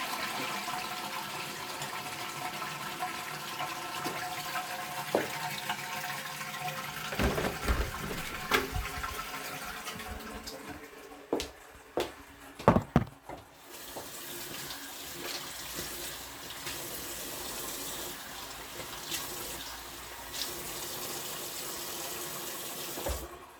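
From 0.47 to 22.92 s, small clicks recur steadily every 0.98 s, about twenty in all; their strict regularity, unlike random dropouts, points to clock drift buffer slips, likely from two mismatched clocks.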